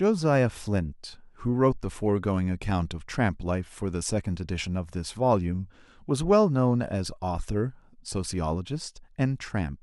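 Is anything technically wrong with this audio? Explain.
No, nothing in this one stands out as a technical problem.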